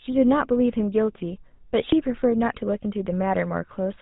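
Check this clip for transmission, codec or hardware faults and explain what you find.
The speech carries one fault for its whole length: GSM full-rate codec damage. The top of the band is missing, with nothing above 4 kHz. The codec models the vocal tract as a filter and excites it with a regular pulse train, keeping only every third excitation sample. That coarse excitation puts a buzzy, gravelly roughness on the voice. The damage is plainly audible, which fits the 13 kbps full-rate coder.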